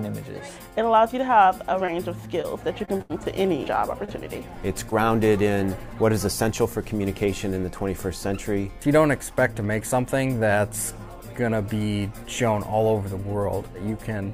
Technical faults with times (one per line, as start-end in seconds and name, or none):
1.85-1.90 short concealed packet loss
2.42-2.45 short concealed packet loss
2.85-3.01 short concealed packet loss
3.01-3.11 burst of packet loss
4.05-4.09 short concealed packet loss
4.89-4.93 short concealed packet loss